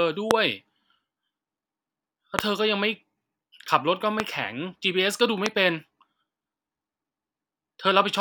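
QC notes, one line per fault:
0.31, 2.39, 4.20 and 5.46 s: loud pop, four of them. Each is a single sharp click about 20 ms long, jumping roughly 20 to 25 dB above the speech, which keeps going underneath without a break. That pattern of brief, isolated spikes sitting on top of an intact signal points to a likely electrical cause, such as a static discharge, a switch, a loose plug or a driver hiccup, injecting a voltage pulse.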